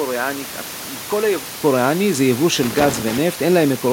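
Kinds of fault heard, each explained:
Input switched to a poorer device: For the first 1.63 s the speech is dull and quieter, by about 10 dB, with a faint new hiss far below the signal. A 200 ms silence follows before the fuller sound returns. This is likely the recording input changing devices. A spectrogram shows a lower flat ceiling, a gap, then energy higher up. The waveform shows lower amplitude before the gap.
Loose connector crackle: Between 2.63 and 3.18 s there is an irregular burst of scratchy crackle. It comes from a worn or dirty contact that makes and breaks as it moves, chopping the signal. The waveform shows sharp, uneven spikes and brief dropouts. A spectrogram shows scattered vertical broadband streaks. The steady room noise, about 16 dB below the speech, can be heard continuing underneath.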